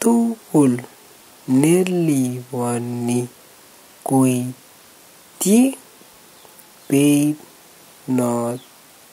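No technical faults can be heard anywhere in this speech recording. Nothing in the audio calls for comment on its transmission or processing.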